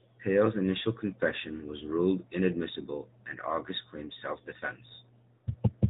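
AMR narrowband mobile codec damage runs through the whole clip. The speech is squeezed into an 8 kHz sampled, vocal-tract-model codec, so nothing above 4 kHz survives. The plainly audible buzzy, synthetic edge fits a mid-rate mode around 10.2 kbps.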